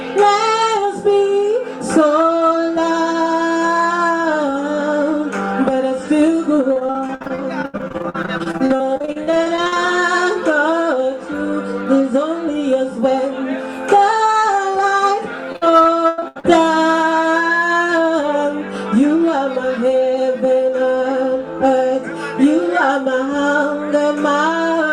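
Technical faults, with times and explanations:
6.73–9.85 s, repeated packet loss (robotic sound): about a third of this stretch is patched by stretching the preceding sound over gaps of up to 80 ms. The result is choppy and robotic, and the spectrogram shows repeated smeared blocks.
15.52–16.46 s, repeated packet loss (robotic sound): eight gaps, the longest 91 ms, are filled with continued earlier sound, covering about a third of the span. The waveform shows duplicated, stuttering segments.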